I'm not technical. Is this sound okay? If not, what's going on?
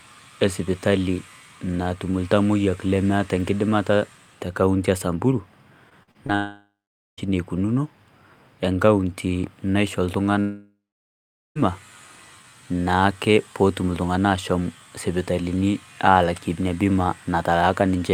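No. Right after "te kauntii e samburu", from 5.89 to 6.35 s, the speech turns choppy and robotic, with five short holes. This is repeated packet loss: bits of audio went missing in transit, and each gap was patched by stretching the sound just before it.

Next come two stretches that fade into a buzz or hiss and then silence, at 6.35 to 7.27 s and again after "ekaunti naishoo" at 10.40 to 11.59 s. The quiet parts last about half a second and about 0.8 seconds, and the speech returns with that section missing. The likely cause is a long network dropout.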